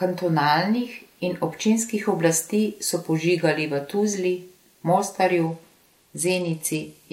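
From 5.47 s to the end at 7.12 s, a Bluetooth SBC bit pool drop sets in: the link lowered its bit allocation, which sounds like a fall from about 28 to 12, near 96 kbps. Upper sub-bands starve, so the speech turns dull and gritty.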